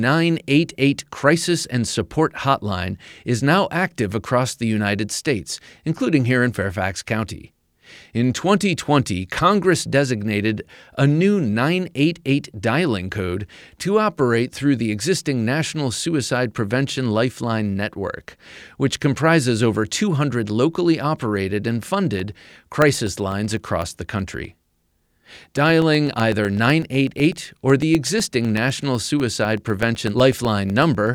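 From 22.2 s, just after "locally operated and", periodic USB or driver dropouts begin and continue to 31.07 s. Every 0.125 s, a blocked bus or driver skips about a millisecond of audio, filled with silence. Regular ticks result, audible over the speech.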